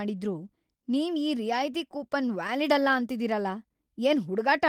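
A speech clip with scattered short gaps between 1.73 and 2.49 s, after "ನೀವ್ ಈ" and before "ಅಲ್ಲ ಅಂತಿದೀರಲ": about five tiny holes, none longer than about 10 ms, each filled by stretching the preceding sound. They register as isolated ticks and smears rather than one audible dropout or burst.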